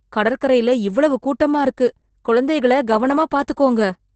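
From start to finish the speech has been through Opus voice compression at a starved bitrate. The coder runs its SILK linear-prediction mode in wideband, so nothing survives above about 8.7 kHz, and the excitation left after linear prediction is coded very coarsely, which fits a rate near 10 kbps. The damage is heavy: the speech sounds muffled and dull, with a hoarse, buzzy roughness and a faintly robotic, processed edge.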